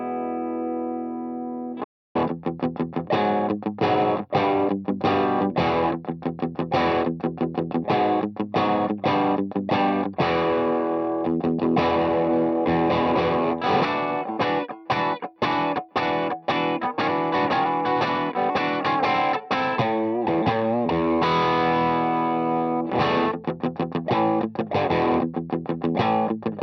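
At 1.84 s the sound cuts off abruptly into silence, with no room tone, until it resumes mid-flow at 2.15 s. This audio dropout to silence removes about 307 ms of material, likely because the input signal was briefly lost while the recorder kept writing silence.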